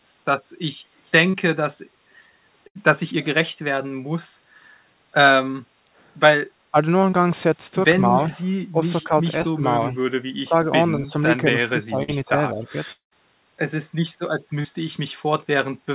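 Speech heard through a narrowband call path, with nothing above 4 kHz from its G.711 A-law coding, and marked by several transmission faults. Brief smears or wobbles at 1.3 s, 7.11 s, 10.28 s and 14.61 s are short concealed packet loss. Between 20 and 40 ms of audio failed to reach the decoder each time, and the receiver bridged the hole by extending the preceding sound for roughly 10 to 35 ms before blending back into real audio. At 2.67 s and 12.03 s the sound briefly turns into a held buzz or fading hiss before jumping forward. Each is a burst of packet loss, with about 80 ms and then about 40 ms missing. Concealment stretched the last sound while turning it down, and the audio resumed later with the intervening stretch gone. The level dips at 6.71 s by about 15 dB, more gently at 8.08 s by about 5 dB, and then for longer between 8.72 and 9.98 s by about 15 dB, between 10.44 and 11.13 s by about 10 dB, and between 11.52 and 12.76 s by about 10 dB. 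These dips match speech suppressed in double talk, likely from an echo canceller that could not tell the talker from loudspeaker echo while both sides spoke and so pulled the level down. At 12.92 s a fading buzz or hiss gives way to roughly 130 ms of silence before audio returns at 13.13 s, some 200 ms having never been played. This is likely a long network dropout, where nothing arrived and concealment ran out.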